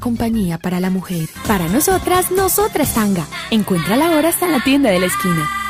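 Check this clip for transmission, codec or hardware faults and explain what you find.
Nothing here gives any sign of a transmission, codec or hardware problem, so there's nothing to flag.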